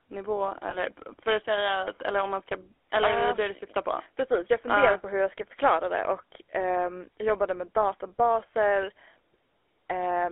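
Throughout, the speech carries the buzzy, gravelly roughness of the GSM full-rate codec, consistent with 13 kbps. The coarse pulse excitation causes it. The band runs 300 Hz to 3.4 kHz.

From 0.70 to 0.76 s, just before "för att säga", lost GSM frames cause a brief metallic ring. The concealment held the last good frame, which points to one missing 20 ms frame.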